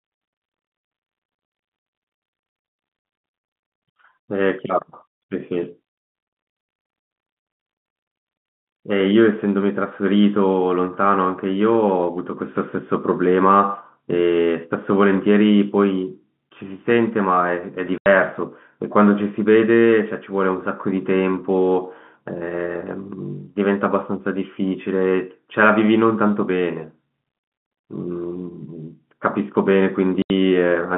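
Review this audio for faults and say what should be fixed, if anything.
The speech drops out abruptly three times, at 3.76 s, 17.98 s and 30.22 s, each hole with hard edges. The gaps last 60 ms, 80 ms and 80 ms. This is packet loss filled with silence: packets of the G.711 telephone stream never arrived, and the receiver inserted digital silence instead of concealing the loss. Both lengths are multiples of 20 ms, which points to 20 ms packets with three or four lost in a row. Enabling packet loss concealment at the receiver, with a jitter buffer and redundancy or FEC on the link, would smooth over these gaps.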